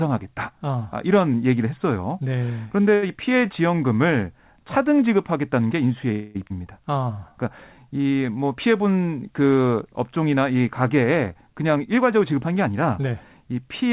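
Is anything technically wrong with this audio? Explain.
Yes, several call-delivery faults disturb this speech, which has passed through a narrowband call codec, likely G.711 A-law, with nothing above 4 kHz.

At 2.94 s a short stall from a late packet holds the sound for 83 ms while the jitter buffer sits empty; nothing is lost, and the spectrogram shows a frozen, smeared band.

At 3.08 s a short concealed packet loss drops about 40 ms, bridged by a 5 ms fill, leaving a brief smear and a thin vertical seam.

From 6.12 to 6.37 s a call audio freeze, likely from held-up packets, stretches the last sound into a fading buzz or hiss for 228 ms, visible as flat, repeating waveform cycles.

At 6.49 s a skip ahead jumps past about a fifth of a second of speech, the waveform butting two unrelated shapes together almost directly.

Jitter buffer slow-down runs from 6.85 to 7.34 s (87% speed, 71 ms added) and 7.74 to 8.38 s (88%, 88 ms added), repeating pitch periods so speech drags at unchanged pitch.

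Jitter buffer speed-up from 10.98 to 13.42 s trims around 200 ms at 108% speed, so the speech sounds hurried, with syllables compressed in time but harmonic spacing unchanged.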